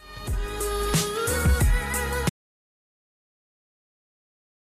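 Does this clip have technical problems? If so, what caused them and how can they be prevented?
Yes. At 2.30 s the sound stops abruptly and the clip stays in complete silence through to the end, an audio dropout to silence. The input was likely lost through a disconnected device, failed link or accidental mute while the recorder kept writing silence. Unlike a noise gate or fade, there is no decay tail and no residual room tone. Secure cables and connections, and monitor input levels while recording.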